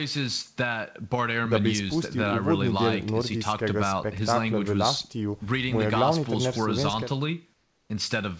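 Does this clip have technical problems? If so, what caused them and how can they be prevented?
Yes. From 7.54 to 7.90 s, a 360 ms stretch of the background is replaced by comfort noise: the real room sound gives way to a steady, featureless hiss about 4 dB quieter, set against a background already about 44 dB below the loudest passages. The likely cause is discontinuous transmission, where the sender's voice detector judged this gap silent and stopped sending audio, leaving the receiver to synthesise noise until sound resumed. The audio, with nothing above 8 kHz as expected of a wideband call codec, carries this swap within the call path. To prevent it, disable discontinuous transmission or make the voice detector less aggressive at the sender.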